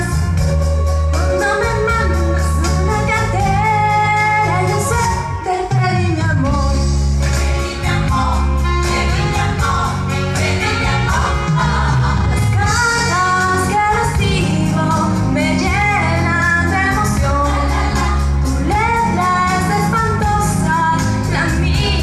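No technical faults can be heard anywhere in the recording, and the signal stays steady and intact throughout.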